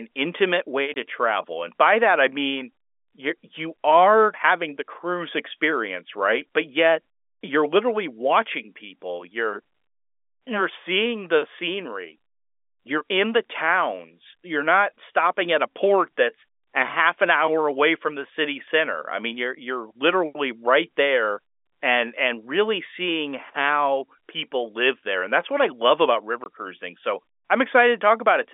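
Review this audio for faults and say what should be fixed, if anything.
Packet loss filled with silence: the network dropped audio at 0.94 s and again from 26.44 to 26.46 s, and the receiver played silence in its place. Each hole is about 20 ms, which fits one lost 20 ms packet. The hard edges cut into the telephone-band speech. Packet loss concealment at the receiver, or forward error correction on the link, would fill these gaps instead of leaving silence.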